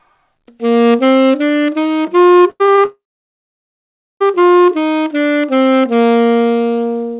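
A clip of everyday sounds, heard through a G.711 A-law call path whose spectrogram shows nothing above 4 kHz. From 2.5 to 2.85 s, repeated packet loss gives a choppy, robotic stretch: four short gaps, the longest 97 ms, patched by repeating earlier sound, which shows as smeared, stuttering blocks on a spectrogram. From 2.85 to 4.22 s a fading buzz quickly gives way to about 1.2 s of silence, a flat line in the waveform, before the sound resumes with that section missing. This is likely a long network dropout.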